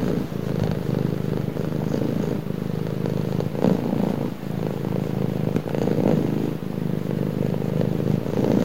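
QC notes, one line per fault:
No technical faults can be heard anywhere in this recording of sounds, and its signal remains intact and continuous.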